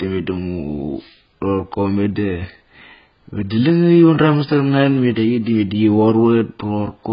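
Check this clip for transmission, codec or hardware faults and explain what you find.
One codec fault runs through the whole clip. AAC compression, throughout: nothing remains above 5.2 kHz, and sibilants and sustained sounds warble and fizz. This heavy damage is likely from AAC-LC at a very low bitrate, around 12 kbps, where the encoder lowers its cut-off, quantises the remaining frequency lines coarsely and leaves spectral holes, giving the speech a dull, smeared sound.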